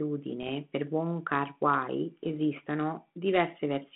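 Bit errors on an ADPCM link occur from 0.41 to 0.49 s and from 2.23 to 2.28 s. Flipped bits knock the decoder's step size and predictor off track, so each error rings on for milliseconds as pops, rough bursts and brief level jumps in the telephone-band speech.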